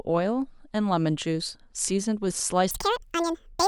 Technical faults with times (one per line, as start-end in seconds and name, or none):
2.71-3.67 section at the wrong speed